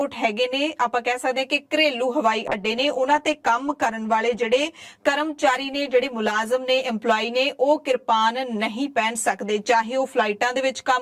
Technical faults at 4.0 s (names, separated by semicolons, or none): channel delay (comb filtering); call bitrate drop